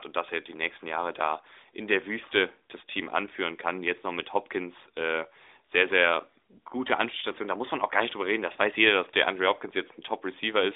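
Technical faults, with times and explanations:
No technical faults detected; the speech runs through an AMR narrowband mobile codec path with nothing above 3.8 kHz and only light coding texture, consistent with the 12.2 kbps top rate.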